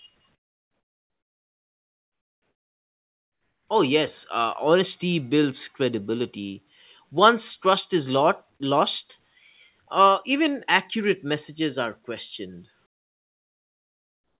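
From 0.35 to 3.68 s, and again from 12.86 to 14.38 s after "accurate messages are questioned", comfort noise replaces the background: steady, featureless hiss about 16 and 21 dB quieter, likely from discontinuous transmission. Unlike a noise gate's silence, synthetic noise continues through the pauses.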